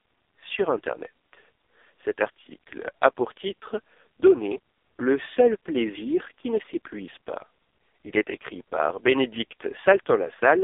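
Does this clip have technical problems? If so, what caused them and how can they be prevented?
Yes. The whole clip has been through the AMR narrowband mobile codec, the old 2G/3G phone speech coder. The band is squeezed to roughly 300 Hz to 3.6 kHz, with nothing at all above about 3.7 kHz, so the speech sounds boxed-in and dull. The damage is heavy. The buzzy, synthetic texture fits AMR-NB's lowest mode, around 4.75 kbps, where very few pulses drive the vocal-tract model. To avoid this, record or route the call over a wideband path at a higher bitrate.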